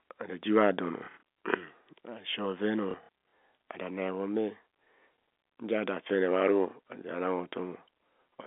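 Short robotic stutters break the speech twice, from 0.99 to 1.20 s and again from 2.91 to 3.09 s, each with a low buzz. This is packet loss with the last packet repeated: the receiver filled gaps by replaying the previous packet. About 150 ms went missing across 240 ms in the first burst and 210 ms across 420 ms in the second, with runs up to 60 ms, which fits 30 ms packets. The telephone band of the G.711 line is audible throughout.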